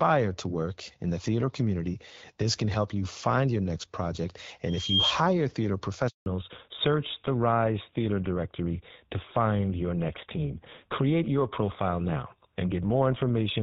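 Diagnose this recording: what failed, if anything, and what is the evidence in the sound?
Loudspeaker feedback squeal, in the acoustic and analogue path. Just after "find your next project", a 3.2 kHz tone swells from 4.68 s. It builds in about a third of a second to roughly 5 dB above the speech. It stops at 5.14 s. The microphone was hearing its own loudspeaker, and the loop gain passed unity at that frequency.

Handover gap, at the network stage. At 6.08 s the speech fades out within a few tens of milliseconds. Silence follows for 180 ms, until 6.26 s. The call was moving between networks, and no speech frames arrived during the switch. Whatever was said in that window is gone.

Fallback to narrowband, at the codec stage. From 6.26 s to the end, nothing remains above 4 kHz. The speech turns duller and rougher than before the gap, where the AMR wideband (HD Voice) codec sounded clear. 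The sudden bandwidth loss fits a drop to GSM full rate after the handover.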